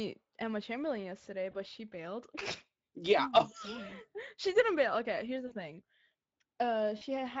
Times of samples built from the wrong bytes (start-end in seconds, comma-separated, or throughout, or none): none